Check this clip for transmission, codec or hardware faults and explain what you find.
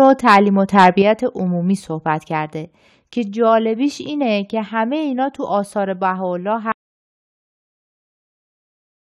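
Three hardware-side faults stand out: clipping at the start, an abrupt level cut just after, and a loss of input at the end.

Microphone overload appears from 0.00 to 0.36 s and again from 0.78 to 0.88 s. The input gain was likely set so high that peaks ran about 5 dB past the converter's ceiling. A few percent of samples have flattened tops, giving the loudest moments a harsh, crackling edge.

A microphone volume stepped down event follows at 1.02 s. Software likely reacted to those clipped peaks by cutting the device's input gain in a single move of about 7 dB, so speech and background alike drop suddenly in level.

An audio dropout to silence begins at 6.72 s and lasts to the end. The input feed was likely lost while recording carried on writing silence. The speech cuts off mid-flow into total silence with no room tone, and nothing after that point survives.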